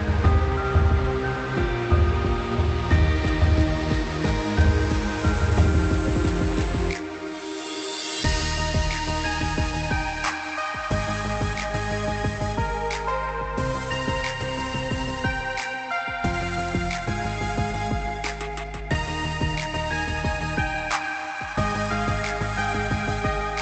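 Nothing goes wrong anywhere in the audio, which simply comes across as a normal call over Opus, with its top end stopping around 8 kHz.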